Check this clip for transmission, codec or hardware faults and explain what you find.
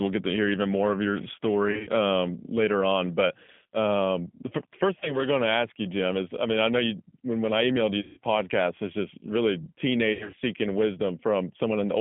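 The clip carries two faults: G.729 coding throughout, and four bursts of VoIP packet loss concealed by the speech codec.

Throughout the speech, G.729 coding narrows the line to about 150 Hz to 3.5 kHz. The codec rebuilds each frame from a vocal tract filter, a pitch predictor and a few pulses rather than from the waveform itself, so the voice sounds rough and slightly synthetic, which fits an 8 kbit/s codec. Unlike a plain telephone band-limit, which only dulls the sound, this adds the buzzy, artificial texture.

Packet loss concealed by the speech codec occurs four times. At 1.71 to 1.90 s, after "even more of your" and before "um later on", about 100 ms is missing, scattered over 160 ms. At 5.00 to 5.19 s, just before "going to ask you", a single 20 ms gap occurs. At 8.01 to 8.18 s, 160 ms is lost. At 10.13 to 10.42 s, after "podcast it's just really", 180 ms is lost across 280 ms, the longest run being 80 ms. 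In each gap the decoder stretches its last pitch and filter into a fading buzzy tone or coloured noise, and the voice stays weak for a moment afterwards. Dropouts that leave only silence or clicks sound different, because nothing fills the gap.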